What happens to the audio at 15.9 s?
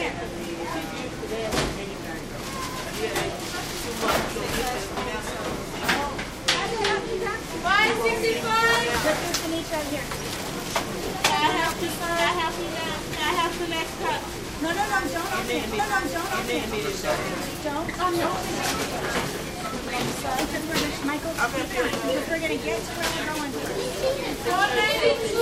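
At 15.9 s the audio is inside a stream segment repeat running from 15.78 to 16.78 s. The player queued the same segment twice, so roughly one second of sound plays again, adding 1.0 s, with a small blip where playback jumps back.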